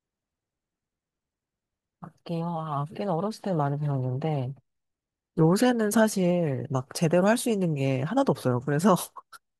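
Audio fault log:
No fault is heard in this speech clip.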